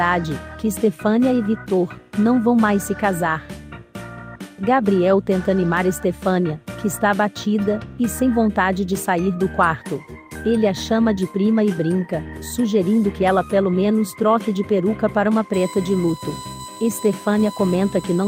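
From 15.54 s to the end of the clip, current drawn by a USB device in 1 ms frames is leaking into the audio path through the shared power or ground, producing USB whine. That 1 ms cycle turns into a steady 1 kHz tone, strongest at the fundamental and sitting roughly 15 dB below the wanted sound, so it carries as a thin, fixed-pitch whistle that does not move with the audio.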